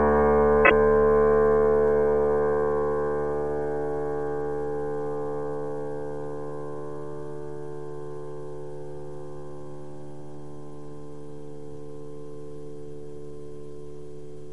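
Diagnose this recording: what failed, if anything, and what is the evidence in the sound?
The failure is repeated frames, at the codec or storage stage. At 0.64 s the sound stutters until 0.71 s. One 26.1 ms block plays three times in a row, which fits a single compressed frame being written or sent again. The decoder simply plays what it receives, so the same slice of audio returns twice more. The two extra plays add 52.2 ms to the recording.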